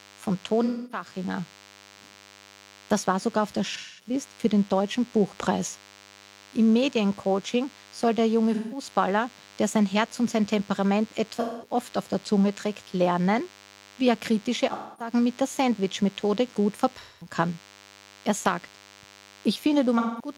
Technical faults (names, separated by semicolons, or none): DECT cordless phone buzz; AAC frame loss with concealment